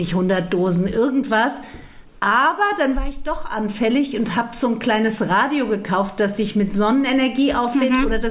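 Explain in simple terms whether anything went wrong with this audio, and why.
Nothing went wrong here: the signal stays steady and intact throughout, with no technical problems to point to.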